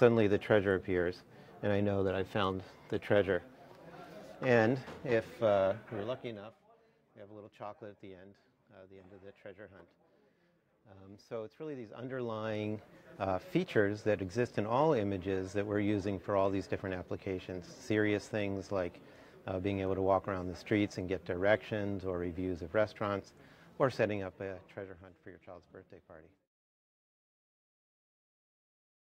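Zipper noise from 5.96 to 6.64 s, and again from 11.84 to 12.88 s: the level drops by about 15 dB, then rises by about the same, in unsmoothed 1 dB steps roughly 30 times a second. Each jump leaves a small click, producing a fast ticking buzz while the gain moves.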